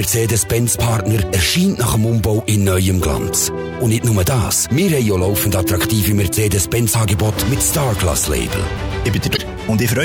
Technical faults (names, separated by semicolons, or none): damaged data in a compressed stream